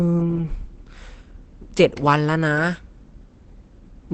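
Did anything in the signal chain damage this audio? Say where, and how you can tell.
Yes, at the codec stage, and it runs through the whole speech clip. Nothing reaches above 8.8 kHz, and the voice is muffled and hoarse, with plainly audible codec damage but less of the warbling, swirly holes of MP3. That muffled, hoarse texture, rather than the clean dullness of a simple low-pass filter, points to Opus compression in its speech (SILK) mode, likely at a low wideband rate around 16 kbps.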